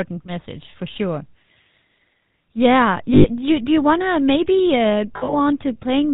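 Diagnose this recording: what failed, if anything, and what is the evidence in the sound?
The codec stage is at fault throughout. The GSM full-rate codec's damage is plainly audible as a buzzy, gravelly roughness, with nothing passing above 4 kHz, which fits 13 kbps full-rate coding. Plain band-limiting would only sound dull, but here the pulse-driven excitation adds a grainy texture.

The network stage also failed, causing lost GSM frames from 3.14 to 3.26 s, just before "you do you want", and from 5.16 to 5.36 s. The second loss is broken up over about 160 ms, with the longest gap around 70 ms. The decoder holds the last good frame, so each loss rings roughly and metallically instead of dropping to silence or clicking as a plain dropout would.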